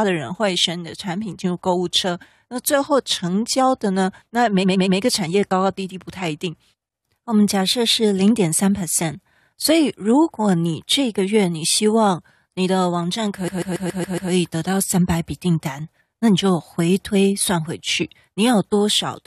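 At 4.62 s the speech stutters with repeated frames: a 116 ms chunk plays three extra times, which fits a five-frame run resent. At 13.47 s a 139 ms block repeats six more times, stretching the audio by about 0.84 s.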